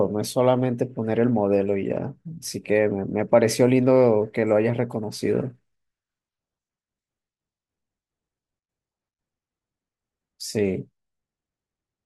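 Nothing goes wrong anywhere in this speech recording, so there's no fault to place on the timeline or explain.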